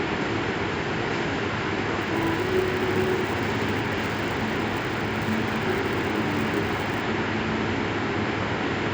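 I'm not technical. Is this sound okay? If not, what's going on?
No. From 2.01 to 7.01 seconds there is a resampler restarted on every block. To change the audio's sample rate, the sound was processed in tiny 10-millisecond pieces, each handled separately, so every join between pieces came out slightly wrong. Those flawed joins repeat 100 times a second, which is too fast to hear as separate ticks. Instead they blend into a buzz that rides on top of the sound whenever there is sound in that stretch.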